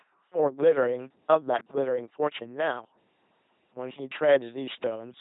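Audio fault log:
throughout LPC-10 vocoder: speech rebuilt from a small filter fed only buzz or hiss, which fits a 2.4 kbit/s coder, so it sounds heavily robotic, with nothing above 3.8 kHz.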